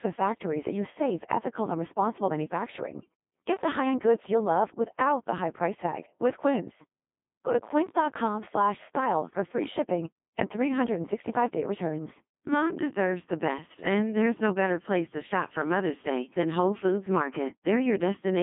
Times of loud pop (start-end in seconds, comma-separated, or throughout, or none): none